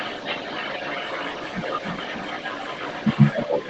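A speech recording with an echo leak running through the whole clip, from 0 to 3.7 s. A delayed copy of the talker comes back about 282 ms later. It sits well below the direct speech, roughly 15 dB down. The likely cause is a loudspeaker at the far end of a call. Its echo canceller failed to remove everything its microphone picked up, so the leftover was sent back. The audio is also band-limited at 8 kHz by the call path.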